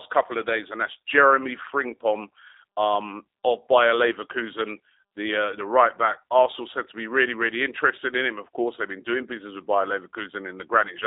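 Throughout the speech, G.729 codec damage is plainly audible, consistent with 8 kbit/s coding: the speech is rebuilt from a filter, pitch predictor and sparse pulses, so it sounds rough and synthetic. A spectrogram shows energy only between 300 Hz and 3.7 kHz, with nothing above.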